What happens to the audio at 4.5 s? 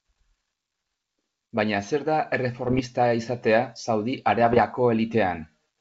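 Bit errors on an ADPCM link disrupt the G.722 stream from 4.44 to 4.61 s, at a rate of roughly half a percent. Each flipped bit knocks the decoder's step size and predictor off track, so the errors ring on as pops and rough bursts. On a waveform these show as sudden spikes and jumps in level, and on a spectrogram as short vertical broadband streaks.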